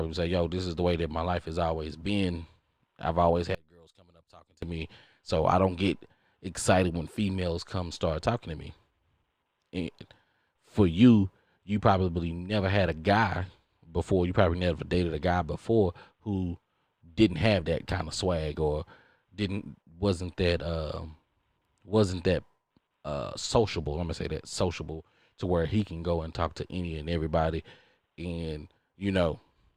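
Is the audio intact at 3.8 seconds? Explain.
No, at 3.8 seconds the speech drops by about 28 dB into a faint remnant from 3.55 to 4.62 s. That's likely one channel inverted: with one side's polarity flipped, the centred content cancels when the two channels sum to mono.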